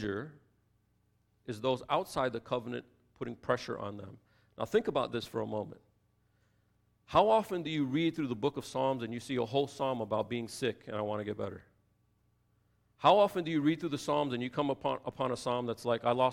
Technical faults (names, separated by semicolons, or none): none